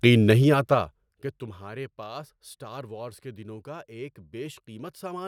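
A level drop in this speech clip was applied in unsmoothed 2 dB steps rather than as a continuous ramp, producing zipper noise from 0.28 to 1.64 s. The gain falls by around 20 dB in all, at roughly ten steps a second, and each sudden jump leaves a small click, so a fine ticking rides on the speech for as long as the level moves.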